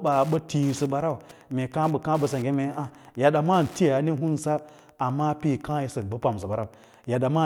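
From start to finish, a faint ticking runs under the speech. It comes at a steady rate of roughly ten clicks a second, one every 102.4 ms. This is Wi-Fi interference. A nearby Wi-Fi radio sends beacons at that interval. The audio circuit picks up the radio energy and rectifies it, which turns each beacon into an audible tick. The ticking sits well below the speech, around 30 dB down. It stays regular for the whole clip.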